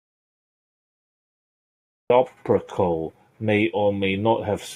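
The input feed appears to have been lost, likely through a disconnected device, failed link or stray mute, while the recorder kept writing silence. This speech clip is therefore an audio dropout to silence from the very first moment: the opening 2.1 seconds are silent with no room tone at all, and the speech only cuts in abruptly at about 2.1 s, mid-flow. Whatever was spoken before that point is gone.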